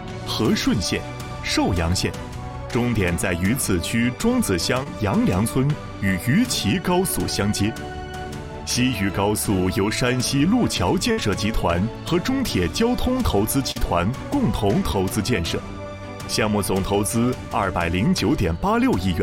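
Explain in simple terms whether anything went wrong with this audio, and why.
A few times, bits of the audio never arrived in time to be played, and the receiver had to cover the holes. At 4.83 s and again from 13.71 to 13.77 s there is short concealed packet loss: about 20 ms and then about 40 ms went missing. The player filled each gap by stretching out the sound that came just before, then blended back in, so these spots come through as a brief smear or small wobble.

The bigger dropout, a burst of packet loss, comes from 11.11 to 11.19 s. Here several pieces were lost together, about 60 ms in all. The receiver kept the last sound going for a moment and let it fade, giving a short held buzz or hiss, and when the audio picks up again a small slice in between is simply gone.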